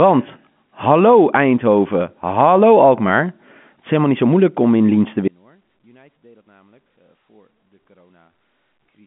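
At 5.28 s the speech drops out abruptly to a faint residue about 35 dB down, lasting to the end; a likely break upstream of a still-live telephone-band path.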